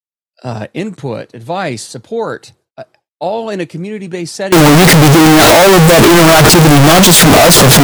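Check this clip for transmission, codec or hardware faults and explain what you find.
One fault: from 4.52 s, right after "in a community based", to the end of the clip, the speech turns into a float read as integer. The likely cause is 32-bit float samples being interpreted as 32-bit integers, so each sample's sign and exponent bits dominate its value. The waveform becomes a near-square wave at an almost fixed, high level, very loud and harsh, with background noise as loud as the speech, yet pitch remains traceable. Ordinary clipping only flattens peaks and leaves quiet passages quiet.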